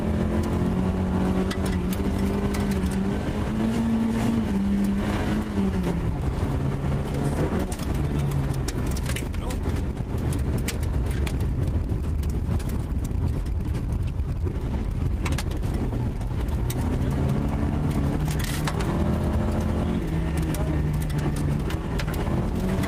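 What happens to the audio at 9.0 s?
Nothing goes wrong at 9.0 s; the audio there plays through cleanly with no audible dropout, click, distortion or other fault.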